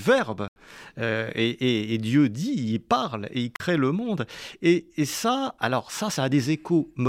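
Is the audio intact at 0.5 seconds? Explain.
No, not at that moment. There's a block of digital silence running from 0.48 to 0.56 s, so 80 ms of the speech simply drops out. A stretch of samples got replaced with zeros, the kind of thing you get when the output buffer isn't filled in time. Because the level jumps straight to nothing and back with no fade, you hear a short hole in the speech.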